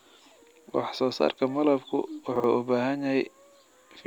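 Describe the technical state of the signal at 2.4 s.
Right around 2.4 s there's a case of chunks out of order, running from about 2.36 to 2.44 s. Two 40 ms slices of the speech have swapped places: one chunk turned up a single slot late and plays after the one that should have followed it. Nothing goes missing, but the sequence is wrong, leaving three hard joins close together, so you get a brief jumbled stutter.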